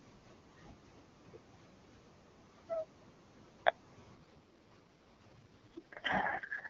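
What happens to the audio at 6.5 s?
The speech is in an AMR rate drop, which runs from 4.16 s to the end. The codec has switched to a much lower rate, fitting a fall from 23.85 to 6.6 kbit/s. The band and flow stay intact. The voice sounds rough, raspy and synthetic.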